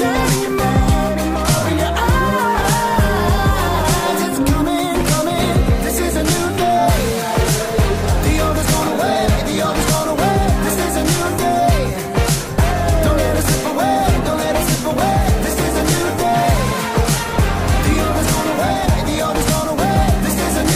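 No technical faults are audible.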